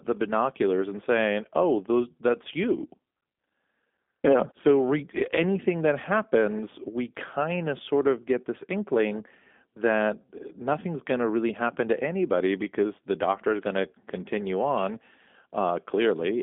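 Speech squeezed through the G.729 codec the whole way through: nothing above about 3.6 kHz survives and the low end is thin, so it's stuck in a phone-line band. The rough, buzzy, slightly synthetic texture from pulse-based resynthesis fits a heavily compressed 8 kbit/s VoIP stream.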